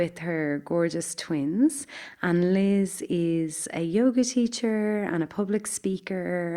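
No technical faults can be heard anywhere in the recording.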